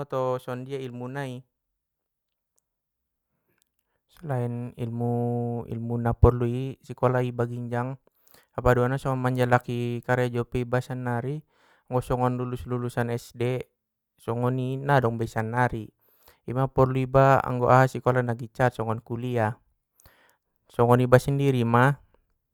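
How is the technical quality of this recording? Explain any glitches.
No technical faults can be heard anywhere in this speech recording. There are no glitches to explain.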